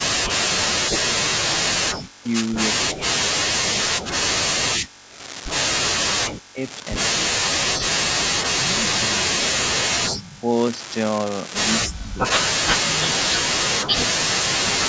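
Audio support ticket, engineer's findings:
Unreliable data bit, whole clip. Steady crackle and fizz under the speech, also present in the pauses. The spikes are all the same size. This points to one marginal data line whose bit flips in a random share of samples, so each error adds an identical spike. It is a hardware or interface fault in the digital path, not an acoustic one.

Speech suppressed in double talk, 0.29–10.54 s. The talker dips and cuts out in pieces, about 7 s affected in total, deepest drop about 40 dB. Again at 11.77–13.94 s, about 1 s affected, deepest about 30 dB. The likely cause is an echo canceller that could not tell the near talker from the loudspeaker echo during overlap and attenuated both.

Echo leak, 10.3–10.4 s. A delayed copy of the voice arrives 197 ms late, about 20 dB under the speech. It recurs from 13.26 s to the end at 205 ms delay, similar level. The likely cause is one side's loudspeaker pickup not fully cancelled and sent back. 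Nothing is heard above 8 kHz, consistent with call microphone processing.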